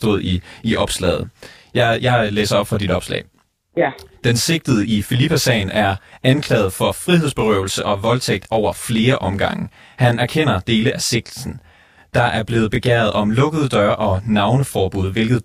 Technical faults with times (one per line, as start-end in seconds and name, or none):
0.00-15.44 channel delay (comb filtering)